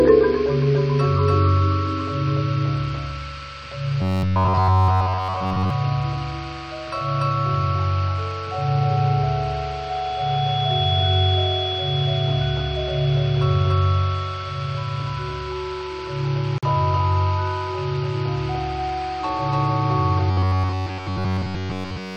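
A doubled audio track runs through the whole clip. A second full-band copy trails the original by about 0.3 s, at roughly the same level. It carries no decay and no room colour, so it sounds like a flat, exact echo. Every onset is heard twice. The likely cause is the same audio being captured again over a slower path, or an edit that holds two copies out of step.

From 4.02 to 5.70 s, the sound turns into a rigid, metallic buzz, the robotic sound from repeated short buffers. A fixed pitch of 93.8 Hz sits on top. It still loosely follows the shape of the audio. Most of the real material in this stretch is skipped. New audio likely arrived too seldom, so the last slice was replayed. The repeat rate fits a buffer of about 10.7 ms.

At 16.58 s, a 46.4 ms gap opens in the continuous sound. This is a gap at a join of encoded pieces. Its edges are smeared by the codec. Afterward the sound resumes exactly where it stopped. 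Two separately encoded pieces were joined without trimming. The first piece's padded last frame and the second's start-up delay both remained in the audio.

From 20.31 s to the end at 22.16 s, the robotic buzz returns at the same 93.8 Hz. This time the repetition is total. The whole stretch is built from the same short slices, so nothing of the real audio gets through. The same buffer starvation is likely at work.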